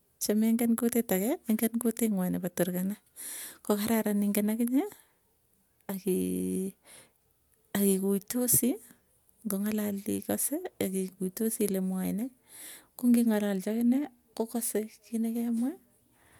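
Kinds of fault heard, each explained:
Nothing stood out on listening to this speech recording.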